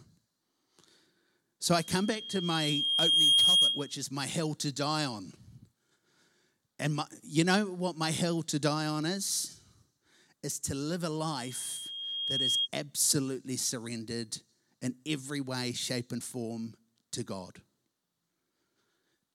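Loudspeaker feedback squeal at 1.71–4.01 s and 11.31–12.68 s. The mic hears its own speaker. A 3.2 kHz tone swells over the sound, ending before "my hell to die" and "absolutely surrendered in every".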